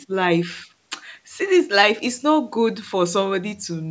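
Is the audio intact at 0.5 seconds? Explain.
Yes, the speech at 0.5 s is intact, with no fault at that moment.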